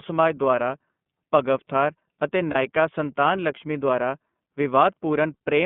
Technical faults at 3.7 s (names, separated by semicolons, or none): iLBC codec